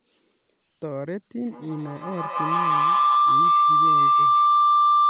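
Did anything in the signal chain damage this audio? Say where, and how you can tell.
Yes, there is a feedback howl from an acoustic loop between two devices on the same call, starting at 1.45 s and running to the end. A tone around 1 kHz, pulsing roughly every 150 ms, climbs to about 12 dB above the speech. Unlike echo, whose repeats fade, each trip round the loop gains level.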